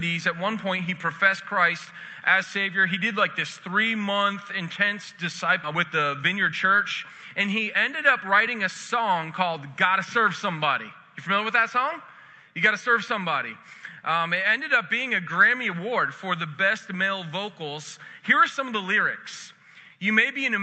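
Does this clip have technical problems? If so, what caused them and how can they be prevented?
Yes. A skip ahead occurs at about 5.63 to 5.65 s. Roughly a second of audio was discarded, either in transit or by the jitter buffer when it overflowed, and playback jumps straight to later material with no fill. On a waveform or spectrogram, this appears as an abrupt splice where the envelope and harmonics change instantly with no gap. Smoother overflow handling that time-compresses gradually instead of dropping whole blocks would prevent this.

A jitter buffer speed-up runs from 5.71 to 9.32 s. The buffer still held too much audio, so the receiver repeatedly cut out short pitch-period pieces, removing around half a second and playing at about 113% speed with unchanged pitch. A spectrogram shows the events packed closer together while the harmonic spacing stays the same, and the waveform shows compressed rhythm. 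Steadier network delivery and a less aggressive buffer target would prevent it.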